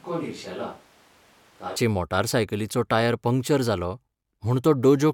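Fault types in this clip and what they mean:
Switch to a distant microphone: Until 1.76 s the speech sounds hollow, roomy, thin and about 10 dB quieter, then abruptly tightens. A farther microphone is the likely source.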